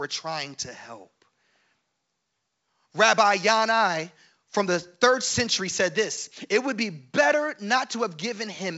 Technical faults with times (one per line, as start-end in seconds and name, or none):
none